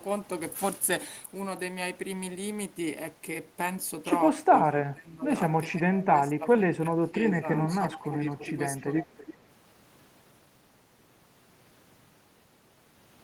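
A speech recording in which an echo canceller, likely struggling while both ends of the call talked at once, turned the near talker down along with the loudspeaker echo it was trying to remove. This speech suppressed in double talk shows up from 4.46 to 5.29 s, where the voice sinks by as much as about 20 dB for roughly 0.7 s in total, and again from 5.66 to 8.19 s, where it dips by up to about 15 dB over about a second and a half, so the talker fades and breaks up in patches. The same canceller also likely failed to subtract everything its microphone picked up from the far-end loudspeaker, and the leftover was sent back as echo leak. A copy of the voice trailing by 333 ms is audible from 7.70 to 8.00 s at about 15 dB below the speech, then from 8.38 to 9.45 s at about 20 dB below, heard as a faint delayed double behind the talker.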